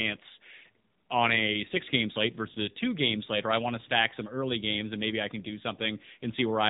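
Speech carrying AMR narrowband mobile codec damage throughout: nothing passes above 3.8 kHz, and a plainly buzzy, synthetic texture, fitting a mode near 8 kbps, sets it apart from simple telephone band-limiting.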